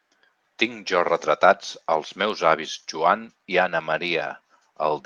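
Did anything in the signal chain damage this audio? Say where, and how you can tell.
No, nothing in the signal chain damaged this audio.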